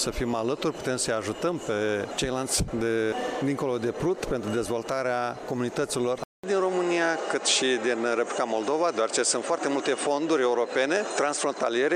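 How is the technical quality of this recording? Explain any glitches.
Input switched to a poorer device at 6.24 s: from here to the end, the sound likely comes from a different, lower-grade microphone or a headset's call profile that the system swapped to mid-recording. A gap of about 200 ms marks the changeover. Afterwards the band stops at 9.3 kHz, so the top end turns dull and boxy, and a new background noise appears roughly 40 dB under the signal. The overall level stays about the same.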